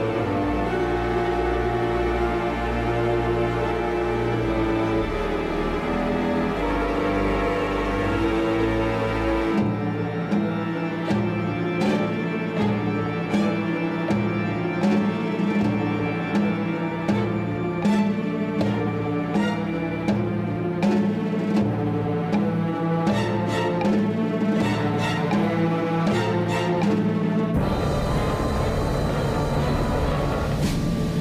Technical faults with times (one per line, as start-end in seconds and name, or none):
none